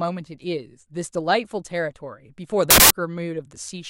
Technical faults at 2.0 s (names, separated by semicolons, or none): none